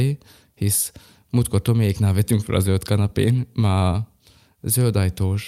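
Listening closely to the speech, nothing stood out as a technical problem at any point.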